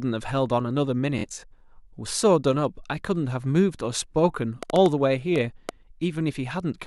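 From 1.19 to 1.44 s there is a Bluetooth stutter. Packets arrived late or not at all, so the receiver kept replaying its last short buffer, losing about 116 ms spread over 232 ms, with the longest run near 46 ms. It sounds like a brief machine-gun buzz, and the waveform shows identical repeated slices.

From 4.63 to 5.70 s a train of clicks ticks over the sound, roughly seven pulses at an uneven pace averaging 4.7 per second and peaking around 15 dB above the signal, likely from nearby interference. The spectrogram shows thin vertical full-band lines, and the waveform shows sharp spikes.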